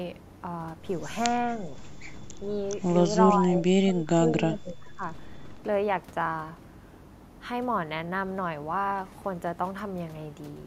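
At 1.38–1.74 s, 2.42–2.47 s, 3.40–4.34 s and 4.50–5.03 s the speech dips, slightly at first, then by about 20 dB. It is likely speech suppressed in double talk, with an echo canceller ducking the talker. Unlike packet loss, the level sags in uneven pieces rather than dropping to silence.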